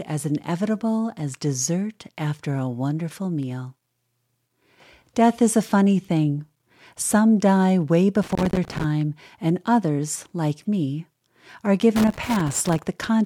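From 8.23 to 8.84 s, and again from 11.96 to 12.79 s, the speech is broken by loose connector crackle, heard as an irregular burst of scratching and crackling. A worn or dirty contact in the signal path is making and breaking as it shifts, so the audio is chopped on and off. On a waveform these stretches show ragged gaps and sharp spikes; a spectrogram shows scattered vertical broadband streaks.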